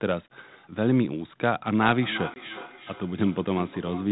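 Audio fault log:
1.72 to 4.12 s, feedback echo between two devices: from 1.72 s the sound returns about every 0.4 s, peaking at about 14 dB below the direct sound. A second device in the room replays the far microphone's signal, and that microphone picks it up again. Its own echo canceller cannot remove audio played by another device. On a spectrogram, faint copies of each burst repeat at regular spacing, thinner and more band-limited. The waveform shows smaller echoed envelopes trailing each segment.
2.34 to 2.40 s, packet loss on an ADPCM call: a 20 ms hole at 2.34 s, consistent with a single lost packet, was filled with silence. The G.726 decoder's adaptive predictor and step size then no longer matched the sender's, so the audio resumes slightly distorted, settling by 2.40 s. The waveform shows a flat gap with sharp edges followed by a distorted stretch. On the spectrogram, a blank vertical slot appears.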